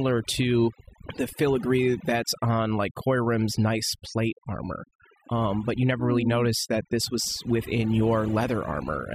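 From start to finish the speech carries overdone noise removal: an over-aggressive denoiser gated individual frequency bands whenever they approached its noise estimate, taking quiet speech detail with them. Pauses fall to near silence with twinkling specks, and a spectrogram shows isolated bright dots scattered across a dark, emptied background.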